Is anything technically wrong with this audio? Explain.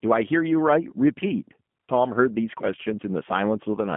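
Yes. The speech has been through G.729 codec coding for its whole length. Rather than storing the waveform, the coder models each 10 ms frame as a vocal tract filter driven by a pitch predictor and a handful of pulses, with a rough, synthetic character that fits the 8 kbit/s G.729A variant. Rebuilding speech from so few parameters leaves plainly audible roughness and a buzzy, artificial edge, and the telephone-style band confines everything between 150 Hz and 3.4 kHz, so the sound is muffled and thin.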